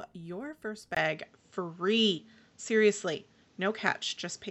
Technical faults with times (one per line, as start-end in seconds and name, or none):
0.95-4.50 input switched to a poorer device